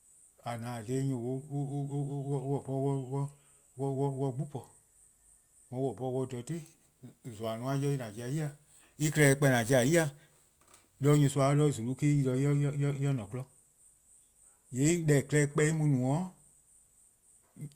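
From 6.51 to 11.28 s, crude rate conversion adds a gritty, inharmonic fizz tracking the speech, about 20 dB below it. Repeated samples, fitting a nearest-sample 32 kHz to 44.1 kHz change, show as waveform steps and stray unrelated spectrogram lines.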